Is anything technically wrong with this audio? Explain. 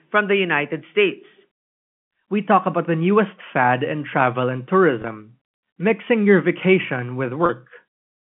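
Yes, two brief glitches where the sound holds a buzzy, slightly frozen tone instead of moving on. The first runs from 5.02 to 5.04 s, right after "fad in travel and". The second runs from 7.46 to 7.49 s, after "mixing your vacation". Both are packet loss with pitch repetition. Audio went missing, about 20 ms and then 30 ms, which fits two and three 10 ms packets. The receiver filled each gap by repeating the last pitch period, which produces the held buzz. Both gaps are short, so the sound never fades to silence. The G.711 telephone coding limits the band to roughly 150 to 3400 Hz.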